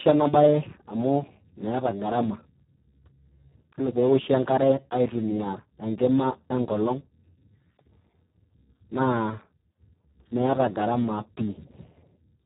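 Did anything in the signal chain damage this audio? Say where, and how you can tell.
Yes. Speex codec damage runs throughout the clip, so the fault sits at the codec stage. The speech sounds noisy and hoarse, and nothing is present above 3.8 kHz, which fits Speex at a very low bitrate of about 4 kbps. At that setting the CELP coder has very few bits left for the excitation signal. The natural voice source is replaced by a crude noisy pulse pattern pushed through a coarse spectral envelope.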